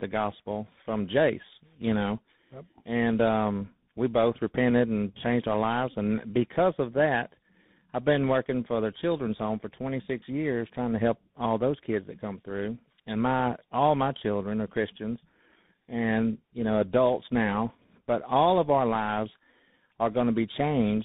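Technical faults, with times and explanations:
Throughout, tandem speech coding: the call appears to have been decoded and re-encoded as it crossed links with different codecs, with the character pointing to GSM full rate at 13 kbit/s, then G.711 mu-law, then CVSD. Each coder reworked the already damaged output of the one before, so the errors stacked. The result is rough, warbly speech, more muffled than any single link would make it, with nothing above 3.8 kHz.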